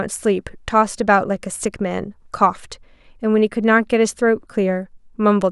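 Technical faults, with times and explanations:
No technical faults are audible in this speech recording. Nothing in the audio calls for a time or an explanation.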